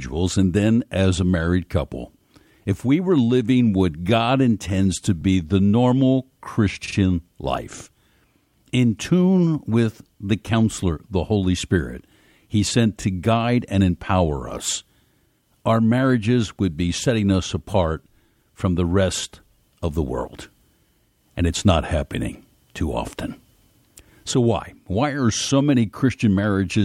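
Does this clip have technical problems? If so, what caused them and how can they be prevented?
Yes, there are repeated frames at 5.20–5.23 s, after "intends to", and at 6.85–6.95 s, just after "the normal". A 23 ms block plays twice, then a 46 ms block plays three times, so the same fraction of a second stutters. Unlike a dropout, nothing is missing; time is added. Preventing it means checking the writing or streaming path so that no compressed frame is written or sent twice.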